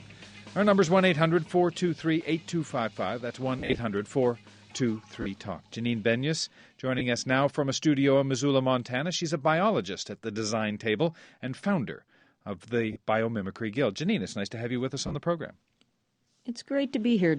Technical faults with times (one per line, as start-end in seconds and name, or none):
3.59-3.79 lost LE Audio frames
5.22-5.26 lost LE Audio frames
6.99-7.01 lost LE Audio frames
12.93-12.96 lost LE Audio frames
15.07-15.15 lost LE Audio frames